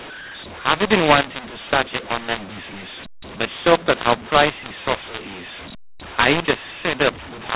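Throughout the speech, a mu-law and A-law mix-up: audio coded as G.711 A-law was decoded as mu-law. Sample levels are scrambled, some too large and some too small, which makes the speech harsh and distorted. Near-silent samples are lifted into audible noise in the pauses.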